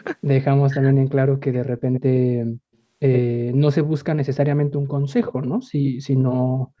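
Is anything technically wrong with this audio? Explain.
Yes, there are three kinds of fault. Speech suppressed in double talk, at 0.64 to 0.98 s and 4.11 to 4.18 s: the echo canceller likely mistook overlapping talk for echo and turned the talker down, roughly 35 to 40 dB. An echo leak, at 1.52 to 2.0 s, 3.13 to 3.2 s and 5.28 to 5.9 s: residual loudspeaker pickup likely escaped cancellation, so a copy of the voice returns 103 ms late, roughly 10 to 15 dB below the speech. Background gated by the echo canceller, at 4.64 to 4.77 s and from 6.33 s to the end: the canceller clamped the microphone, dropping the room sound by about 17 dB and then about 40 dB.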